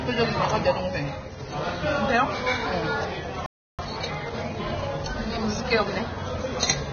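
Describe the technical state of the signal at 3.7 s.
At 3.7 s the audio is silent. A playback stall runs from 3.46 s to 3.79 s, a gap of about 0.33 s. The sound cuts off mid-flow and nothing plays. The likely cause is that the player ran out of data, or its output thread was held up. When output resumes, it picks up where it stopped. It simply halts.

Right after the gap, from 3.79 s to 5.95 s, a time-compressed catch-up follows. The player trims its backlog by removing short slices and cross-fading the joins. The result runs at 1.15 times normal speed while keeping its pitch. This stretch sounds hurried.

Vorbis compression is present across the whole clip, including this moment. The damage is heavy. The cut-off is lowered, so the top end is dull. The remaining treble is coarsely quantised into hiss-like grain. Tones sound rough and attacks are smeared. This points to a low bitrate, likely around 19 kbps.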